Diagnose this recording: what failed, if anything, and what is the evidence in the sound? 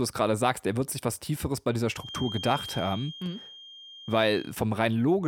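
A thin, steady 3.2 kHz whistle runs behind the speech from 1.93 to 4.56 s, starting just after "bei dieser". It swells and fades slowly in level and sits about 15 dB below the speech. This feedback whistle likely comes from an analogue loudspeaker-to-microphone loop held at the edge of oscillation, so it rings without running away.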